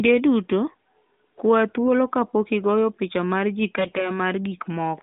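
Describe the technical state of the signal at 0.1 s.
At 0.1 s the audio is intact, carried as ordinary narrowband mobile-codec sound with no fault at that moment.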